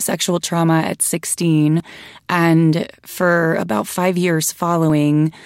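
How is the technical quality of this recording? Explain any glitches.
The recording has two short glitches. At 1.8 s, just before "and for about", the speech jumps forward. A second jump comes at 4.9 s. Both are likely a dropped buffer (overrun). The hardware overwrote samples before the program collected them. The audio on either side was joined directly, with no gap. Around 20 ms vanished at 1.8 s, and roughly 40 ms at 4.9 s.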